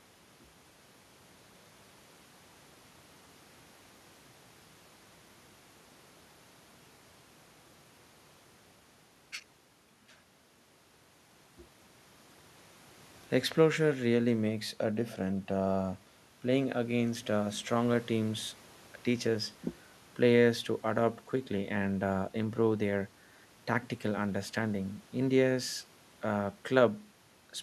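Speech recording, no technical faults detected anywhere in the clip.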